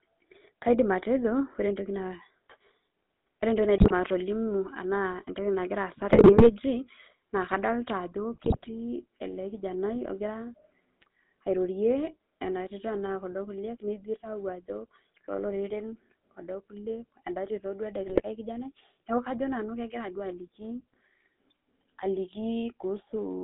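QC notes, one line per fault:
Throughout, GSM full-rate codec. The speech has a steady buzzy, gravelly roughness. The band runs only from about 200 Hz to 3.7 kHz, so it sounds thin and boxed in. The codec rebuilds the voice from a vocal-tract filter driven by a coarse pulse excitation that keeps only one sample in three. That sparse drive gives the grainy buzz. The damage is plainly audible, and it fits the 13 kbps GSM full-rate mode.
3.78–3.92 s, 6.08–6.51 s, 8.34–8.71 s and 18.06–18.23 s, GSM bit errors. The speech breaks into squawks, pops and gargling in four bursts. The middle two are longest, at about 0.4 s each. The first and last are brief, under 0.2 s. Flipped bits reach the decoder and corrupt its filter, pitch and gain values. Each damaged frame then gets a warped spectrum or a sudden level jump. Several frames in a row go wrong, so each burst sounds like a garbled stretch rather than a single click.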